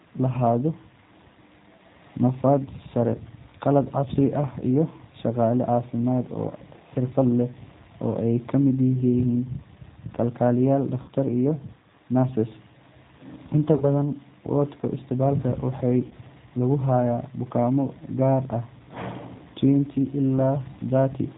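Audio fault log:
throughout: G.729 codec. The sound is roughly synthetic, a texture typical of an 8 kbit/s coder that rebuilds speech from a vocal tract filter, a pitch predictor and a few pulses per frame. On a spectrogram everything above 4 kHz is empty, and the harmonics look smeared.
11.02–11.10 s, 13.76–13.84 s and 16.07–16.14 s: VoIP packet loss concealed by the speech codec. The decoder patches gaps of about 60 ms, 40 ms and 40 ms, which fits three, two and two lost 20 ms packets, by repeating its last pitch and filter at falling gain. Each gap becomes a buzzy tone or coloured noise that fades and recovers sluggishly. On a spectrogram this shows as flat, repeated harmonic bands, and on the waveform as a decaying periodic envelope.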